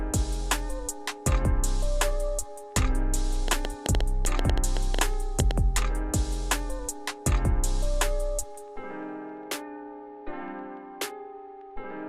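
Something in the signal chain, likely interference from nearby equipment or a faulty connection or power supply, injects a train of clicks into the audio from 3.48 s to 5.52 s. About fifteen sharp pulses of much the same shape arrive at an average of 7.4 per second but with uneven spacing, so they sound like irregular ticking or popping laid over the sound. The loudest peaks stand out at roughly 20 dB above the surrounding signal.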